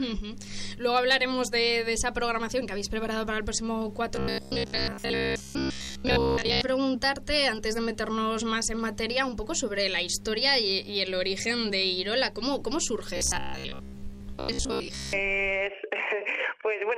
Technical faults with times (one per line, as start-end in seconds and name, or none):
4.16-6.61 robotic sound from repeated short buffers
13.17-15.13 robotic sound from repeated short buffers